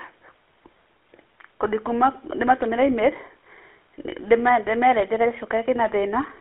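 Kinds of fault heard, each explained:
GSM full-rate codec: The speech was squeezed through the original GSM mobile codec, whose sound fits a rate of about 13 kbps. It models the vocal tract and excites it with coarse, regularly spaced pulses. This leaves a plainly audible buzzy, gravelly roughness, and the band is limited to roughly 300 Hz to 3.5 kHz throughout.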